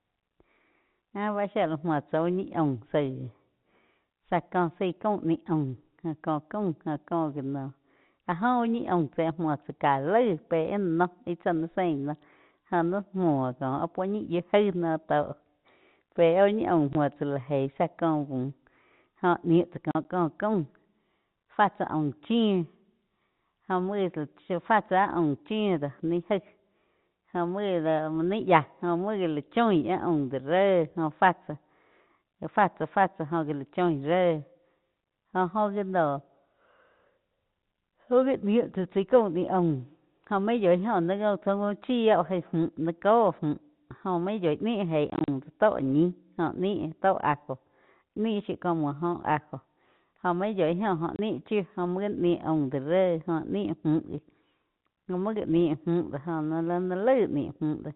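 Packet loss filled with silence: dropped packets were replaced by silence, punching hard-edged holes into the speech at 16.93 to 16.95 s (between "ñi aum" and "muo tsá lá gei"), 19.91 to 20.05 s (after "jóh niu tsá", before "có caum"), 45.1 to 45.28 s, and 51.16 to 51.19 s (before "chiu jo muo gá"), each gap a multiple of what sounds like 10 ms packets. The G.711 telephone coding keeps everything under 4 kHz.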